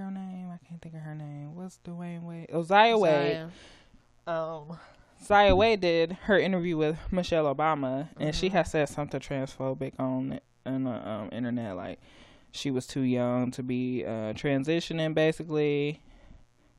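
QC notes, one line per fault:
Throughout, mains buzz: a steady, raspy 60 Hz buzz sits around 40 dB below the speech for the whole clip. Sharp switching spikes, as from a dimmer, rectifier or unshielded lead, arrive twice per mains cycle, 120 times a second. That spreads energy across many harmonics of 60 Hz well into the kilohertz range. This gritty, bright edge is what separates it from plain hum, which is a smooth low tone confined to the fundamental and a few harmonics.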